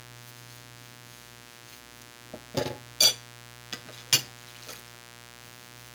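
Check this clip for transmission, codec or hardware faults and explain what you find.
A steady, raspy buzz runs under the sound for the whole clip, sitting roughly 15 dB below it. This is mains buzz: sharp switching spikes from 60 Hz power, arriving twice per cycle, spray harmonics up into several kHz, giving a harsh rather than pure hum.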